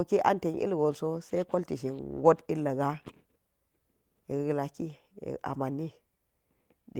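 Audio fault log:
2.17–2.27 s, lost packet rebuilt from error correction: about 60 ms of speech, which fits three lost packets, is replayed from low-bitrate copies, sounding briefly rougher and noisier without any gap.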